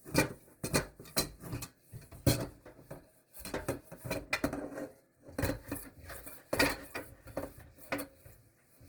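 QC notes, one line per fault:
throughout: Opus compression, likely CELT mode at about 16 kbps, fills bit-starved bands with folded or noise energy, so tones sound plainly grainy, rough and noisy.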